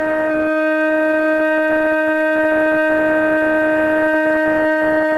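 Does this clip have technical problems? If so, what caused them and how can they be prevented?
No, this music clip has no audible technical faults.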